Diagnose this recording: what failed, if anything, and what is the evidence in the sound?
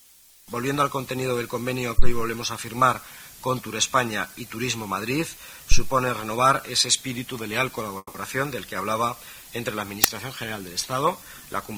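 In the analogue wiring, a supply such as phantom power was switched on a live input twice, and each voltage step went straight through the coupling capacitors into the signal. The result is a phantom power thump at 1.99 to 2.17 s and another at 5.72 to 5.85 s. Each is a deep, low-frequency thud that dies away quickly, over about 41 ms for the first and about 30 ms for the second.

At 7.97 to 8.16 s there is a call audio freeze, most likely from packets stalling somewhere on the network path so the receiving jitter buffer ran dry. For about 170 ms the receiver extends the last sound as a fading buzz or hiss, and the final 30 ms or so go silent. When the audio resumes it carries on where it stopped, with nothing missing but the whole stream now running about 170 ms later.

At 10.04 s the driver or buffer stage sent a block to the output before any audio had been written to it, so stale memory contents were played as samples. 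This uninitialised buffer fault is a single loud crack lasting about 5.8 ms, which fits a 256-sample buffer.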